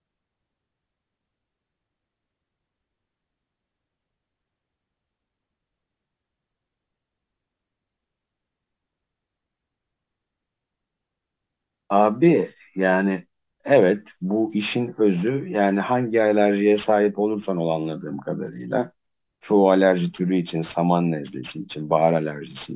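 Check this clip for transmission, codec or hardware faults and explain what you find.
There is one fault, aliasing, and it runs through the whole speech clip. The audio points to a drop from a 48 kHz rate to 8 kHz with no anti-alias filter beforehand, so energy above the 4 kHz fold point mirrors back down into the band as false, unrelated frequencies, roughly 25 dB below the speech. Sibilants come out gritty and metallic. A spectrogram shows energy packed right up to a hard 4 kHz ceiling, with mirrored, downward-sloping traces where rising high components should be.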